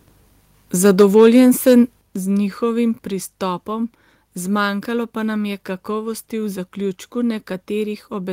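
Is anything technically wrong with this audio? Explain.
Yes. From 0.84 to 1.74 s, just before "z njihovim", the speech shows microphone overload. The loudest peaks run about 4 dB past the converter's ceiling and a few percent of samples are flattened, most likely from excessive input gain. Unlike codec distortion, this is a harsh crackle confined to the loudest syllables.

The microphone volume is also stepped down, in single drops of about 2 dB at 1.02 s and about 6 dB at 2.01 s, just before "z njihovim". Speech and background fall together, likely because the call software reacted to the clipping. A fade would be gradual, but these drops are instant.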